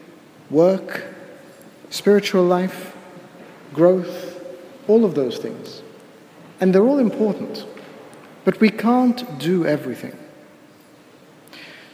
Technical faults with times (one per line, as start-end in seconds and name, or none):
none